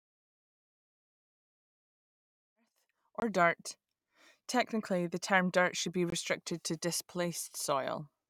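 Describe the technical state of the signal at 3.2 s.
At 3.20 to 3.22 s, right after "referred to as earth", there is a block of digital silence. About 21 ms of audio drops to silence with no fade, which fits a 1024-sample buffer left unfilled, so the sound cuts out and back abruptly around a brief hole.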